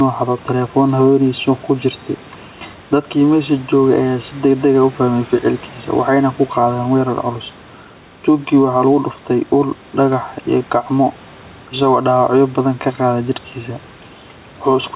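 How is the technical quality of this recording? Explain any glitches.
Two faults run through the whole recording: a hollow, phasey coloration and a level that keeps breathing up and down.

Channel delay (comb filtering), throughout. One channel arrives roughly 3 ms behind the other, and when the two are summed to mono, anything common to both cancels at regularly spaced frequencies. The first notch falls around 150 Hz, with more notches at even intervals above it. That fixed pattern of gaps gives the speech a thin, hollow, slightly metallic tone that never changes, on top of the narrowband sound of the G.711 call codec, which has nothing above 4 kHz.

Gain pumping, throughout. The level swings by about 5 dB. Each loud stretch of speech gets pulled down. Loud and quiet syllables end up squeezed closer together, which makes the delivery sound flattened and compressed. The likely cause is input gain set far too high for the microphone, with a fast limiter or compressor repeatedly clamping it back down.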